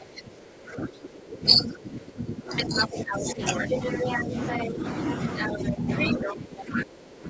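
From 0 to 4.35 s, the echo canceller likely could not separate the talker from the loudspeaker while both sides spoke, causing speech suppressed in double talk: the speech dips by up to about 15 dB. From 2.56 to 4.7 s, imperfect cancellation likely lets the other side's voice leak through, about as loud as the talker. A brief suppression of about 10 dB follows at 4.66 to 4.84 s. Quieter leakage returns at 5.36 to 5.56 s. From 5.52 s to the end, suppression again pulls the speech down by up to about 15 dB. Leakage comes through at full level at 5.96 to 6.33 s and quieter at 6.75 to 6.83 s.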